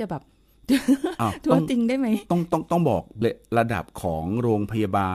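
At about 3.21 s the speech suddenly jumps ahead with a small blip. That points to a stream segment skipped: one chunk of the segmented stream likely failed to load, and the player carried on with the next.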